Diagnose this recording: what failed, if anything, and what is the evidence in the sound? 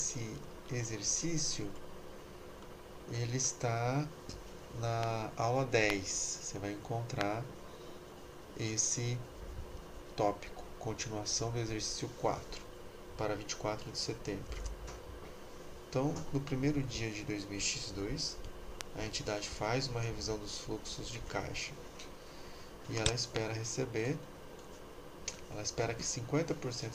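Five loud pops break through the audio, at 5.03, 5.90, 7.21, 18.81 and 23.36 s. Each is a single sharp click lasting about 20 ms. They stand some 20 to 25 dB above the surrounding sound, which carries on unbroken beneath them. The likely cause is in the analogue wiring: a loose plug, a switch contact or a static discharge injecting a brief voltage step. The following circuits shape that step into a short pulse.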